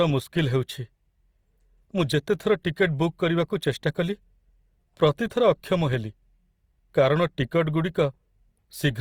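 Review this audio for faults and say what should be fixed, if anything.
Throughout the speech, the sound is grainy and rough, with noise-like texture in the highs, though the band still extends to about 20.3 kHz. This is likely Opus compression in its CELT music mode: at a rate that fits roughly 24 kbps, bands are filled with folded or synthetic noise. To prevent it, encode from the original source at a higher Opus bitrate, or keep an uncompressed master.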